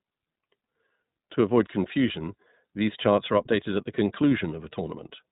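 From start to finish the speech carries iLBC codec damage, and it's plainly audible. Nothing gets through above about 3.8 kHz, so it sounds boxed-in, and each short frame, which fits 20 ms at 15.2 kbps, is coded on its own, leaving a rough, slightly synthetic edge.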